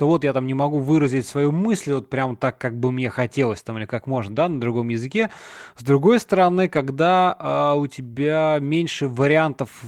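Packets went missing at 1.03–1.05 s, 4.15–4.61 s after "хотелось там или как", 5.17–5.23 s, and 6.75–6.77 s after "другой стороны". Each was lost packet rebuilt from error correction: the decoder played low-bitrate backup copies, so no gap, but those stretches turn rougher and noisier, longest at 4.15 s.

At 8.13–8.17 s, after "а у", about 20 ms never arrived. The receiver concealed this short packet loss by extending the preceding sound and blending back, leaving a brief smear or wobble.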